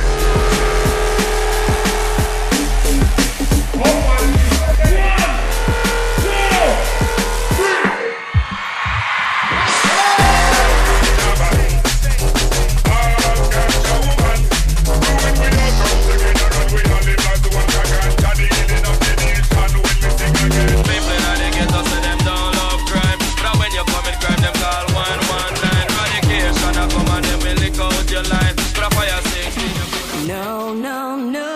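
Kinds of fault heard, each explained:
No audible faults detected.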